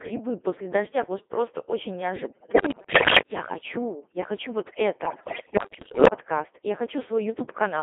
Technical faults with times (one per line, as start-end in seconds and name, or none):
0.00-7.83 Codec 2 vocoder
2.16-3.21 bit errors on digital voice radio
5.05-6.11 bit errors on digital voice radio